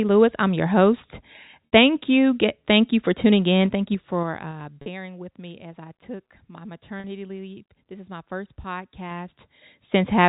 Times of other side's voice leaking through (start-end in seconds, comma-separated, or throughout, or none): none